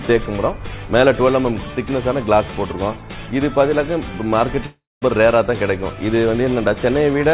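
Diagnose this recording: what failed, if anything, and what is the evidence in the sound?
Network stage, a long network dropout from 4.66 to 5.04 s: the sound smears into a fading buzz, then about 0.2 s of silence, likely from lost packets rather than a clean edit cut.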